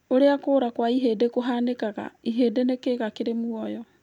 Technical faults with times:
none

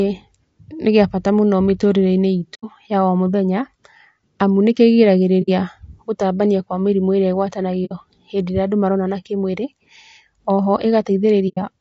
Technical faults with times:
0.00-11.81 low-delay AAC compression
2.54-2.64 AAC frame loss with muting
5.42-5.49 AAC frame loss with muting
7.85-7.92 AAC frame loss with muting
11.48-11.58 AAC frame loss with muting

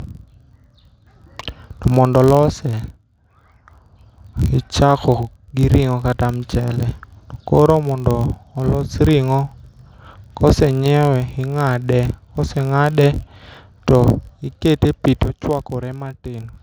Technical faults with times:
0.00-16.62 filter restarted on every block

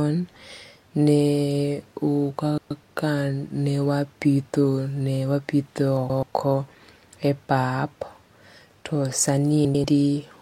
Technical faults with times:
2.58-2.83 frames out of order
5.97-6.23 frames out of order
9.65-9.84 frames out of order

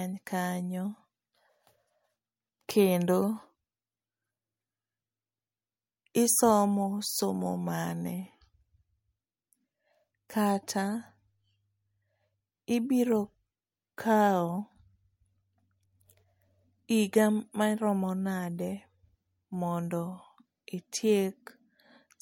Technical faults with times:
10.29 pre-echo
13.97 pre-echo

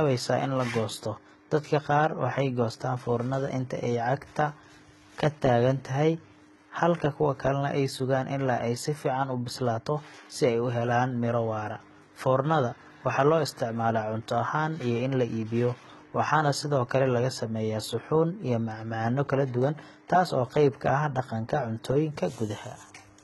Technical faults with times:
0.00-23.24 HE-AAC compression

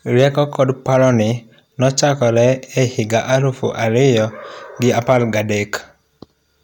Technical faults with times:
0.19-1.10 hard clipping
5.09-5.17 hard clipping

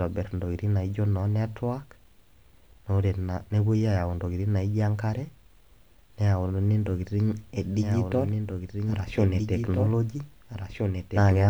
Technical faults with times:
6.90-11.50 doubled audio track

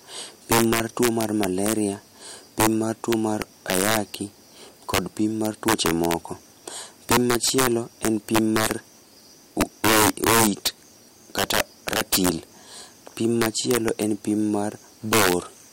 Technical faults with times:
0.00-15.72 integer overflow

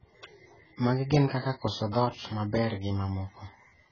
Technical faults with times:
0.00-3.92 AAC compression

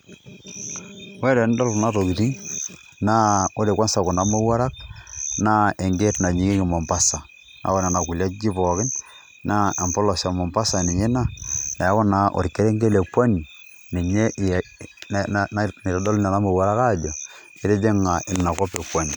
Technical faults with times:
none

